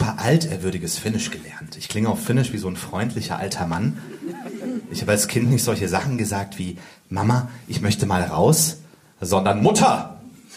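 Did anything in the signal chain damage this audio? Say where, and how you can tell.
No, none of the stages from capture through playback left any audible damage anywhere in this clip.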